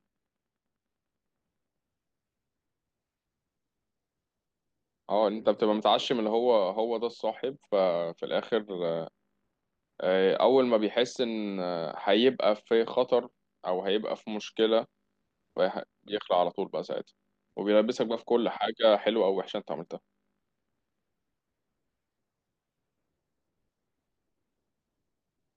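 Nothing in the speech recording stood out as a technical problem on listening.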